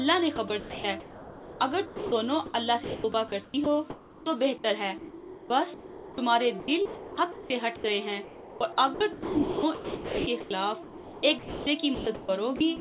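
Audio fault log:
0.36–4.26 s, sound chopped by the voice detector: about 1.96 s of quieter material drops out and is filled with a steady hiss rather than silence or repeated fragments. The likely cause is voice-activity switching with comfort-noise fill.
4.98–12.80 s, sound chopped by the voice detector: what is likely the same choppy gating returns, with about 4.17 s swapped for flat comfort noise. Unlike packet-loss concealment, nothing smears or stutters; the edges simply cut to noise, over a narrowband channel with nothing above 4 kHz.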